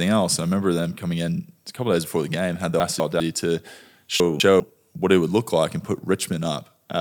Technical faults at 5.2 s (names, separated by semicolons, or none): none